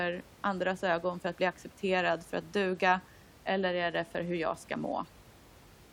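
Nothing stood out on listening to this speech recording, with only the room's own background noise sitting about 25 dB below the speech.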